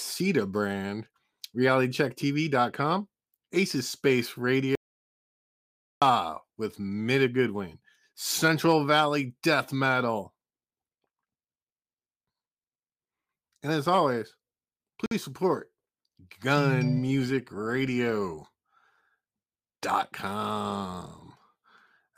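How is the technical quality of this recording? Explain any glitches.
The recording has one clear glitch. An audio dropout to silence runs from 4.75 to 6.02 s: the speech cuts off mid-flow into about 1.27 s of dead digital silence with no room tone, likely from a lost input. The waveform shows a flat line, and the spectrogram shows a blank vertical band.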